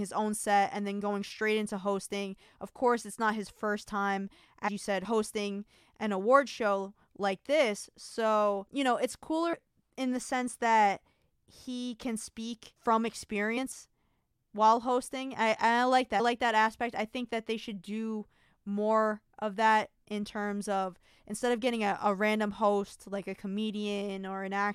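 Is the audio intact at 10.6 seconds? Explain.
Yes, the speech at 10.6 s plays through cleanly, with no audible fault at that moment.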